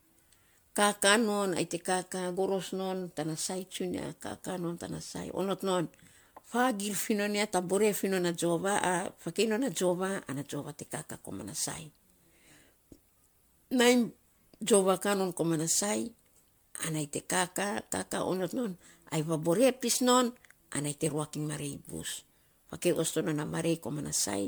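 Generation loss runs through the whole speech clip. The speech sounds swirly, smeared and hollow, with blurred consonant attacks, which points to roughly seven rounds of MP3 encoding at 128 kbit/s. Each pass likely requantised on a shifted frame grid, stacking noise and spectral holes, with nothing above 20.1 kHz.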